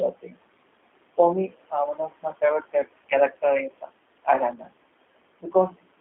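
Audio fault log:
throughout: noise suppressor artifacts. The room noise, about 17 dB below the speech, is pulled down by about 21 dB between phrases and returns under them.
throughout: G.729 codec. The audio is confined to roughly 250 Hz to 3.5 kHz and sounds plainly rough and synthetic, consistent with 8 kbit/s G.729A rebuilding speech from a few pulses per frame.
0.13–0.44 s, 1.94–2.42 s, 3.69–3.90 s, 4.58–4.70 s: speech cut by the noise suppressor. Parts of the speech are treated as noise and drop by about 14, 13, 13 and 9 dB respectively. This swallows about a fifth of a second in the first span and about a tenth in each of the others.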